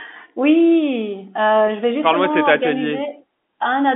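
No technical faults can be heard in this speech.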